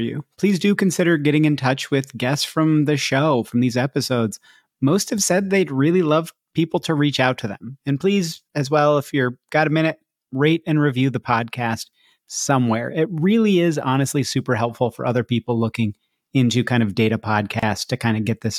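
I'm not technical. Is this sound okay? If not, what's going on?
No, there's one glitch. At about 17.59 to 17.63 seconds the speech drops out for roughly 32 milliseconds. That's a gap at a join of encoded pieces: two separately compressed chunks were stuck together, leaving their built-in padding silence in between before the speech resumes.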